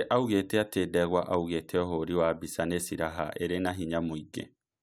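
Nothing in this recording of speech stands out as a technical fault, so there's nothing to flag here.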